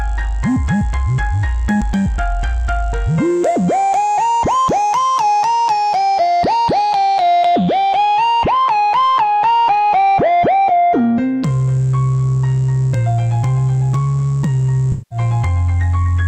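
Around 14.92 to 15.19 s there's AAC frame loss with concealment. A stretch of the encoded stream, roughly 190 ms of audio, which fits about nine AAC frames, never reached the decoder. Rather than leaving a hole, the decoder covered the gap by extrapolating from the last spectrum it had decoded cleanly. So instead of the actual sound at that point, you hear a brief smeared, washy patch.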